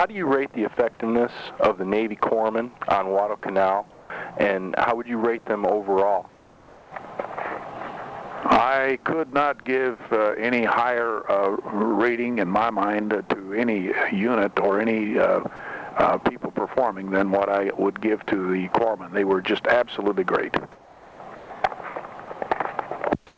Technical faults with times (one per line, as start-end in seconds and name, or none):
3.92-4.10 comfort noise in place of the background
6.29-6.92 comfort noise in place of the background
15.56-15.59 sound dropped by the voice detector
20.72-21.50 comfort noise in place of the background
23.27-23.37 comfort noise in place of the background